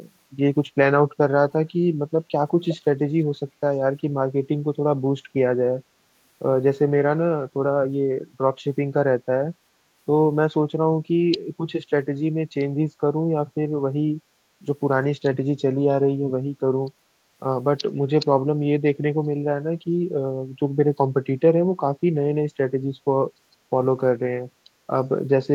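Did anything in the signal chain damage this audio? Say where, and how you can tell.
Yes. From 2.68 to 2.77 s a faint, delayed copy of the speech surfaces for a brief scrap, trailing the original by about 365 ms and sitting roughly 10 dB below it. That spacing and level point to an echo leak, most likely at the call-processing stage: a far end on loudspeaker whose echo canceller failed to fully subtract what its microphone picked up, so a residue of the speech was sent back down the line.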